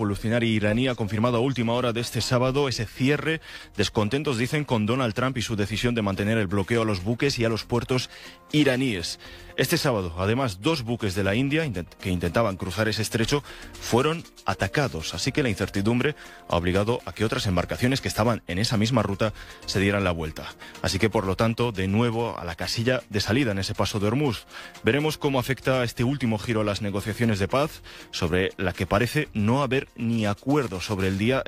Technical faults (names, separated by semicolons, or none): none